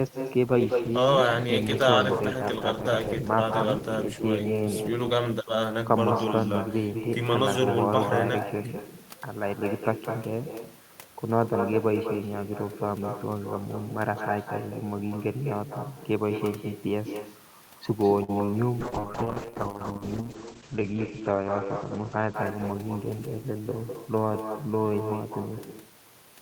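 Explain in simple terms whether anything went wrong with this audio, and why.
Every phrase in this speech is followed about a fifth of a second later by a quieter, hollow copy of itself. That is echo with no canceller: the other end played the call through a loudspeaker, its microphone picked it back up, and nothing removed it.

From 0.49 to 8.15 s, and again from 18.82 to 25.68 s, the voice turns rough and watery, and in the second stretch also dull and muffled. Both are a call bitrate drop: the connection weakened, so the encoder squeezed the sound into far less data.

Between 18.23 and 18.54 s the voice goes choppy and robotic, with four tiny holes. This is repeated packet loss: pieces of audio never arrived, and each gap was patched by stretching the last sound.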